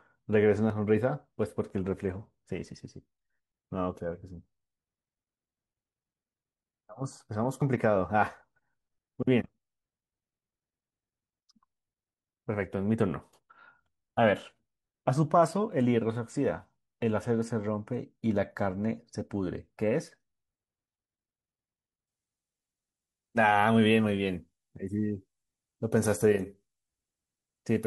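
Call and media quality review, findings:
Overlap between stream segments, 0.70–0.73 s, 1.70–1.75 s, 7.62 s. Tiny skips as the player trims overlapping segment timestamps, discarding 28 ms, 43 ms and about 16 ms of real audio; waveform jumps at each cut. Spacing of first two suggests 1 s segment boundaries. Probable component: segmenter/packager timestamping or player join logic.

Pre-emphasis left on, 22.07 s to end. Thin, harsh, overly sibilant speech; treble about 14 dB high at 10 kHz relative to 1 kHz. Boost fits a 75 µs FM pre-emphasis curve with no matching de-emphasis applied. Probable component: capture or transmission chain feeding this final section.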